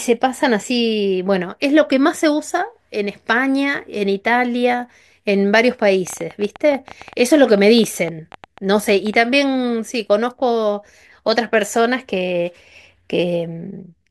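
From 6.07 to 9.15 s, a train of clicks runs through the speech. About thirty similar pulses arrive unevenly, roughly 9.5 per second. They sit about 5 dB above the signal and are heard as popping. Likely cause: interference or a faulty connection or power supply.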